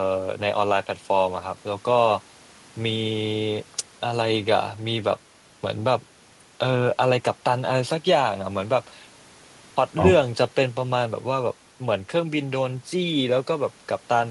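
Sample clock jitter runs through the whole recording. The converter's clock wanders by a few microseconds. Samples land slightly off time. A fine hiss rides on the speech, roughly 35 dB below it. It grows on loud, bright sounds. It disappears in pauses.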